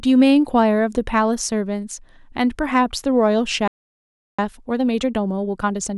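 At 3.68 s the player most likely ran dry of buffered data, or its output thread was held up, so nothing reached the output: a playback stall. The speech cuts off mid-flow and leaves about 0.71 s of silence until sound resumes at 4.39 s.

From 4.39 s to the end at 5.98 s, the player works off the backlog the stall built up by dropping short slices and cross-fading across the joins. This time-compressed catch-up runs the speech at about 1.25 times normal speed at unchanged pitch.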